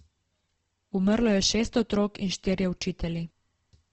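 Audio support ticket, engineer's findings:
Speech grainy and rough throughout, nothing above 8.3 kHz. Likely Opus compression: band energies held but starved bands filled with folded or noise content, consistent with music-mode coding near 16 kbps, wideband.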